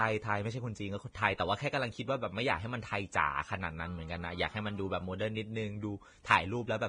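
From start to finish the speech sounds hissy and grainy, with roughened tones and smeared consonant attacks, and nothing survives above 9.7 kHz. The likely cause is heavy Vorbis compression at a low setting, in the region of 23 kbps, where treble detail is quantised so coarsely it turns into noise. A spectrogram would show a hard ceiling at 9.7 kHz and speckled, mottled energy below it instead of clean harmonic lines.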